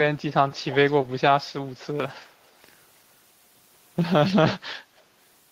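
Faint echo leak appears at 0.17 to 0.22 s, then clearer at 0.56 to 0.75 s, and faint again at 4.97 to 5.01 s. The speech returns about 0.32 s late, likely from a loudspeaker echo canceller missing some pickup. A loud pop hits at 2.00 to 2.02 s, a single sharp click, slightly above the speech. It is likely a voltage glitch, and the speech continues beneath.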